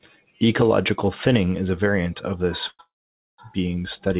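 At 2.68 s a call audio freeze begins: the last sound is stretched into a brief fading buzz, then silence, and a second freeze follows at 2.81 s, lasting to 3.40 s, mostly silent. This is likely delayed packets draining the jitter buffer. The audio resumes where it stopped, so nothing is lost, but about 0.68 s of delay is added. Throughout, the narrowband call path leaves nothing above 4 kHz.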